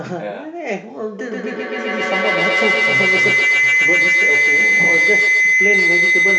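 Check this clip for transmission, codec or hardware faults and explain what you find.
One fault is present: feedback howl from 1.19 s to the end. A microphone-to-loudspeaker loop gains level each pass, building a tone around 2 kHz, about 8 dB above the speech, with a loop delay of roughly 150 ms. Unlike echo, it grows instead of fading.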